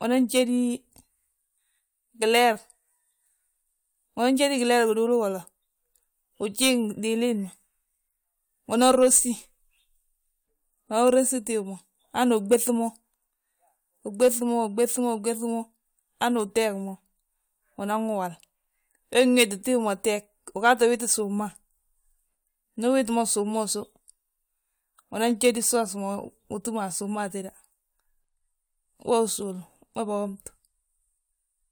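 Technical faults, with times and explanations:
No technical faults detected.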